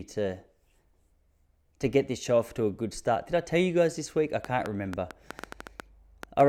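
From 4.45 to 6.41 s, a train of clicks ticks unevenly over the speech, about six per second and peaking well above it, likely interference or a faulty connection.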